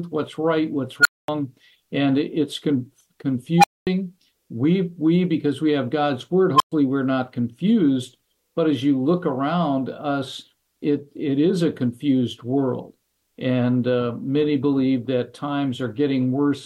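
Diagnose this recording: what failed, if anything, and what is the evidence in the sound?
An unstable filter in the digital processing stage: a recursive filter's feedback grew without limit, clipped, overflowed and reset. At 1.01, 3.58 and 6.55 s, a tone near 1.5 kHz, 700 Hz and 1 kHz swells within 46 to 60 ms, then drops to silence for 232, 232 and 116 ms.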